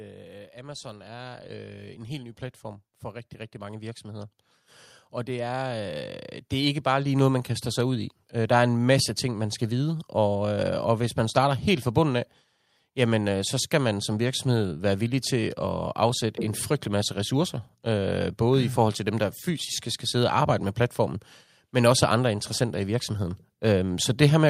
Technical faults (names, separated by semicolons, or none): automatic gain rising